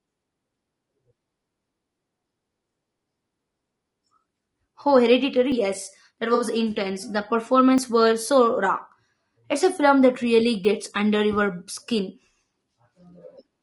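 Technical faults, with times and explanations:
Throughout: low-delay AAC compression, plainly audible. The speech is rough and grainy, with noise filling the gaps between harmonics and a thin, synthetic-sounding top band. This likely comes from AAC-ELD at a low rate, around 32 kbps. Its short frames resolve pitch poorly.
5.52, 7.78, 9.14, 10.65 s: dropped buffer (overrun). Each is a sudden skip forward: just before "were so raw", just after "were so raw", and between "a film that really" and "under your skin". There is no gap. The likely cause is roughly 10 to 20 ms of samples overwritten before they were read.
6.34–6.43 s: AAC frame loss with concealment. About 60 ms is missing, which fits three lost frames. The decoder rebuilt it from the last good spectrum, so the patch sounds smeared and noisy rather than silent, then normal decoding resumes.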